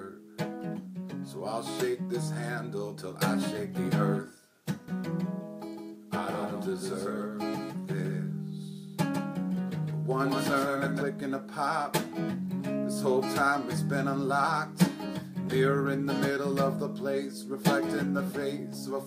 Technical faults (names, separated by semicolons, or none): doubled audio track